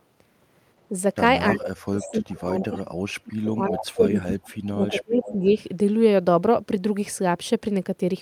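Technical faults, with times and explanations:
1.51 to 5.45 s, speech suppressed in double talk: the voice repeatedly dips, thins and breaks into pieces across this stretch, about three seconds in all. The deepest cuts go down by about 30 dB, so parts nearly vanish. The likely cause is both sides talking at once. The echo canceller cannot tell the near voice from the loudspeaker echo. It turns everything down together.
1.56, 2.01, 2.60, 3.68, 4.19, 4.88 and 5.19 s, echo leak: short scraps of a delayed copy of the voice appear, each lasting under a third of a second. Each trails the original by 306 ms. Most sit about 15 to 20 dB below the speech. The one at 3.68 s is louder, about 10 dB down. These are likely loudspeaker sound reaching the far microphone that its echo canceller failed to remove, which was then sent back.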